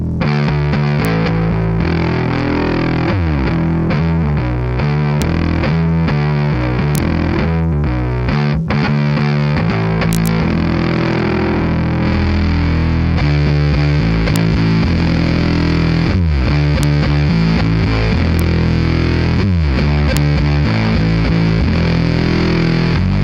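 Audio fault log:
Throughout: mains buzz at 50 Hz, about 40 dB below the signal. Switching spikes twice per cycle spread harmonics upward into a steady, raspy hum.
1.05, 5.22, 6.95–6.98, 10.13–10.27, 14.36, 16.83, 18.39 and 20.17 s: integer overflow. Peaks only just over full scale wrap to the opposite sign instead of limiting, producing violent cracks.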